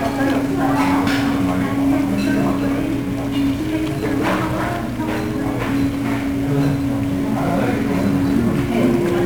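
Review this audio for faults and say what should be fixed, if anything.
The whole clip, from start to finish, has a dense fuzzy crackle over everything, with a broad hiss that swamps the treble and leaves the sound grainy and rough. This is heavy 1-bit DFPWM compression damage. The codec keeps only one bit per sample, and each bit just nudges an adaptive level up or down. The resulting quantisation error spreads as loud broadband noise, which fits a stream of about 48 kbps. To prevent it, store or transmit the audio with a higher-resolution codec or as PCM instead of DFPWM.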